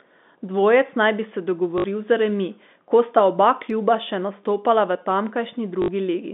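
At 1.78 to 1.84 s, just after "naj bi se", and again at 5.82 to 5.88 s, packet loss with last packet repeated fills 60 ms gaps with looped audio, which fits three lost 20 ms packets. Each gap gives a robotic 50 Hz buzz rather than silence. The G.711 telephone band of about 200 Hz to 3.6 kHz is audible throughout.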